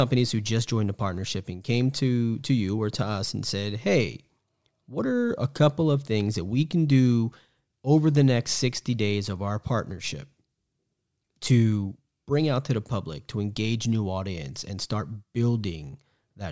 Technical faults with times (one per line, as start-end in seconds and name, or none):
none